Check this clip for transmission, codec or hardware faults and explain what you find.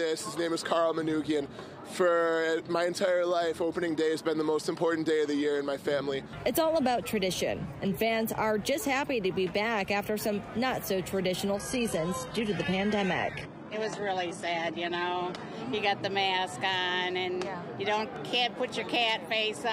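There's one transmission fault here: the adaptive stream drops to a lower bitrate from about 11.55 s to 15.55 s. The connection seems to have slowed, so the player swapped to a much leaner encode for those four seconds, and the quality falls off abruptly with no gap. Codec artefacts pile up, which fits a jump from a mid-rate AAC stream down to a very low-rate HE-AAC one, before it snaps back.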